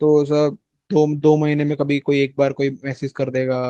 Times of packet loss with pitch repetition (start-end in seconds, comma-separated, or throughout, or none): none